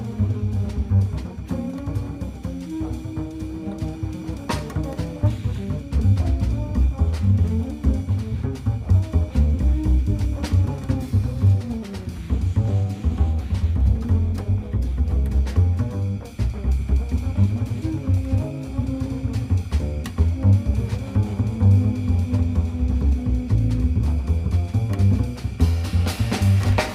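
The signal carries no audible technical fault at any point, with nothing in the capture, processing or playback chain that a careful listener could single out as a problem.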